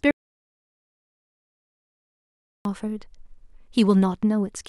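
At 0.11 s the speech hits an audio dropout to silence, dead silence until 2.65 s, likely a lost input link, so about 2.5 s is simply gone.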